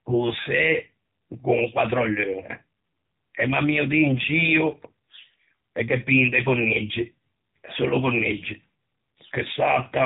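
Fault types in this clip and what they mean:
AMR narrowband mobile codec: The speech went through AMR-NB, a 2G/3G phone codec that resamples to 8 kHz and rebuilds the voice from a vocal-tract model excited by sparse pulses every few milliseconds. Here it ran at a low rate, with the heavy damage pointing to a mode around 6.7 kbps. Nothing above about 3.8 kHz survives, so the voice sounds boxed-in and telephone-thin throughout, with a pronounced buzzy, synthetic edge.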